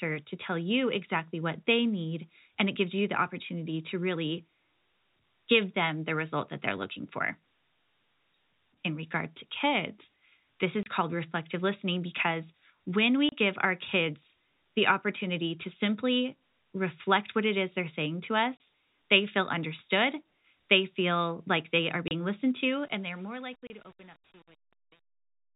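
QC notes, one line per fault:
10.83, 13.29, 18.57, 22.08 and 23.67 s: packet loss filled with silence. Five holes, each 30 ms long, cut the speech off abruptly and let it resume just as abruptly. The receiver had nothing to play for those spans and inserted plain silence instead of concealing the gap. The identical 30 ms length each time fits a single lost packet of that size.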